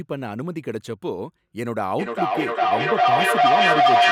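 Feedback howl begins at 1.99 s and runs to the end of the clip. The speech is being picked up again from a loudspeaker and fed back into the microphone, and each trip around that loop comes back louder rather than quieter. The returning sound narrows to a tone around 700 Hz, pulsing at roughly 400 ms intervals as the loop cycles, and it climbs to about 10 dB above the speech.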